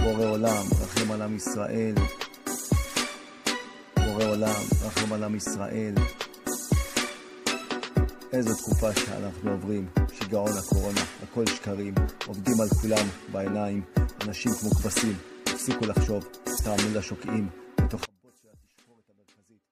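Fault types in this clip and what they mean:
Damaged data in a compressed stream: From 16.55 to 16.61 s a short glitch breaks in. When part of the coded stream is corrupt, the decoder misreads the affected frames, loses sync and resumes at the next valid frame header, so a brief stretch of audio is garbled or skipped. On a spectrogram it shows as a narrow vertical smear of odd broadband or tonal energy. In the waveform there is an abrupt discontinuity where the signal jumps rather than flowing on.
One channel inverted: From 18.05 s to the end the level drops by about 34 dB, leaving only a faint residue. The likely cause is one stereo channel with reversed polarity. When the two channels are summed to mono, everything common to both, including centred sound and bass, cancels, and only their small differences remain. A spectrogram shows energy collapsing across the band, with lows almost gone. 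The waveform's amplitude shrinks sharply and stays low to the end.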